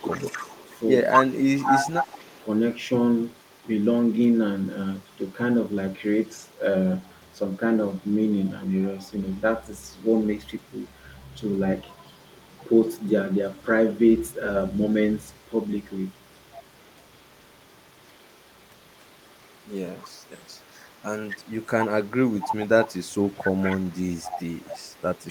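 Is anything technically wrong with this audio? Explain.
Yes. Speech suppressed in double talk occurs at 0.0–0.4 s, 1.14–1.89 s, 2.27–2.39 s and 23.3–24.03 s. When both sides spoke at once, the echo canceller likely couldn't separate this talker from loudspeaker echo and turned everything down. The voice briefly dips by roughly 20 to 30 dB.

Echo leak runs from 0.03 s to the end. A loudspeaker's echo canceller likely failed to remove all its microphone picked up, sending residue back. A faint copy of the voice, around 25 dB down, trails the original by 247 ms.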